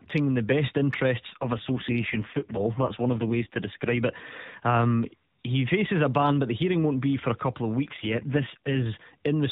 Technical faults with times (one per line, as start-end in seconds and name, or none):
1.30-4.04 AMR rate drop
7.86-8.88 AMR rate drop